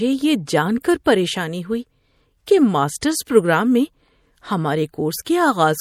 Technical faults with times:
0.00-5.81 MP3 compression
0.46 pre-echo
0.81-1.06 pre-echo
2.46 pre-echo
3.01 pre-echo
5.25 pre-echo

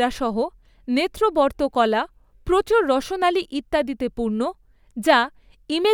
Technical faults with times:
none

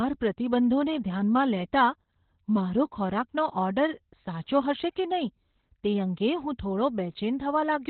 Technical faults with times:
0.00-7.89 Opus voice compression

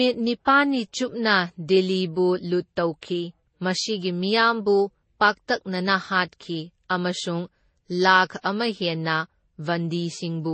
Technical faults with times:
0.00-10.54 transcoding between lossy codecs

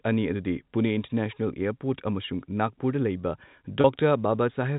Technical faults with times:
3.81-3.84 packet loss with pitch repetition

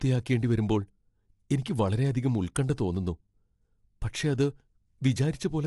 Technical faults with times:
0.00-5.67 low-delay AAC compression
1.64 pre-echo
2.55 pre-echo

